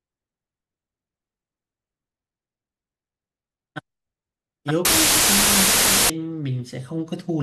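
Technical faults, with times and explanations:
4.85 to 6.10 s, wrong sample width: audio stored as 16-bit integers is read here as packed 24-bit integers, so each three-byte read straddles parts of two real samples. Most resulting values mix unrelated bytes, producing loud, harsh noise with the speech buried underneath. Because three bytes are consumed where one and a half samples lie, the passage runs 1.5 times fast, raising the pitch by the same ratio.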